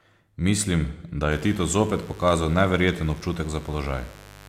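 A steady, raspy buzz comes in under the speech at 1.31 s and runs to the end of the clip, sitting roughly 20 dB below the talker. This is mains buzz on a 50 Hz supply. Something like a dimmer, a rectifier or a missing shield is letting sharp switching spikes into the signal twice per mains cycle, and those spikes carry a dense stack of 50 Hz harmonics that give the hum its gritty edge.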